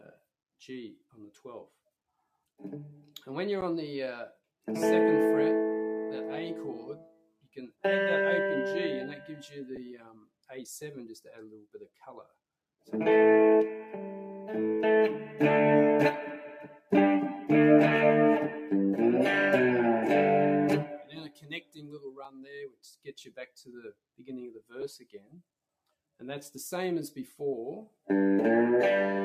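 A speech-tuned noise suppressor is running over the whole clip, treating steady parts of the sound as noise and pulling them down, so the level keeps swinging by about 5 dB instead of sitting still.

At 3.61 s there's a block of digital silence, a 10 ms hole where the output buffer went unfilled or got invalid numbers. The sound drops out and comes back with no fade, and at that length it registers as a tick or dip rather than a real gap.

Then the suppressor properly bites, cutting the sound it took for noise: 6.9 to 7.84 s (deepest about 19 dB), 9.97 to 10.32 s (about 19 dB), 11.56 to 11.88 s (about 12 dB), and 16.74 to 16.92 s (about 15 dB). Steady and fading material sinks or has its decay cut short.

In between, at 9.76 s, there are lost LE Audio frames, one 10 ms frame. The LC3 decoder patched the gap by reusing the last spectrum with random signs, so for that moment the tone turns into a brief noisy smear.

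The suppressor cuts get longer from 20.92 to 22.82 s (about 19 dB), and inside that stretch, at 22.25 s, there's a second block of digital silence, 5 ms long, another tick-sized dropout. Another cut follows from 23.04 to 23.99 s (about 19 dB), then another single lost 10 ms LE Audio frame at 24.81 s smears the sound the same way. The last cut runs from 25.0 to 25.42 s (about 13 dB).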